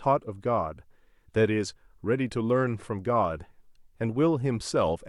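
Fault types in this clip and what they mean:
No faults can be heard.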